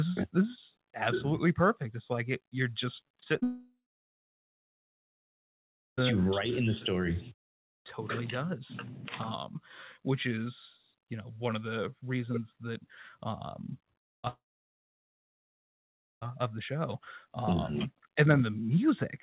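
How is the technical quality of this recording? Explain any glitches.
The recording has two clear glitch episodes, each a burst of choppy sound followed by a long silence. The audio is band-limited to 4 kHz throughout, which fits a G.711 mu-law call path.

Repeated packet loss (robotic sound) occurs at 3.08 to 3.43 s and at 13.99 to 14.28 s. Each episode has five short gaps, up to 33 ms in the first and 78 ms in the second, patched by continuing the previous sound. This produces a choppy sound with pieces missing. On a spectrogram it shows as smeared, repeated vertical slices.

A long network dropout follows each burst, at 3.43 to 6.03 s and 14.28 to 16.28 s, losing about 2.5 s and 1.9 s of audio. A brief fading buzz gives way to near-silence, likely from a stalled connection. The waveform shows a flat gap, and the spectrogram shows a blank band.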